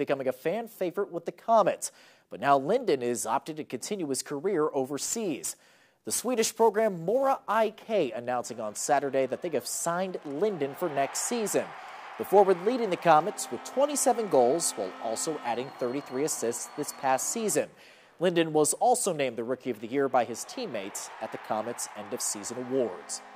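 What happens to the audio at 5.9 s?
At 5.9 s the audio is inside a stretch of sample clock jitter running from 4.96 s to 7.91 s. The converter's timing wanders by roughly a few microseconds, so each sample lands slightly off. The error tracks the waveform's slope. It sits at about 20 dB below the signal and is heard as a grainy hiss that swells on loud, bright passages and drops away in quiet ones. On a spectrogram it shows as a diffuse noise haze hugging the louder, higher-frequency content. The waveform looks essentially unchanged.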